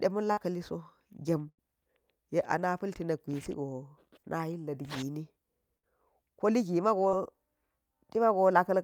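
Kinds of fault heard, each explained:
Burst of packet loss: at about 0.31, 1.49 and 5.78 s the speech freezes into a fading held buzz or hiss for 50 to 90 ms, then jumps ahead with up to 100 ms missing. Several packets in a row were lost or arrived too late, so the receiver stretched the last sound.
Short concealed packet loss: near 7.09 s a brief 20 ms smear briefly blurs the speech before it settles. A few hundredths of a second never reached the decoder in time, so the receiver continued the preceding sound and then blended back into the real audio.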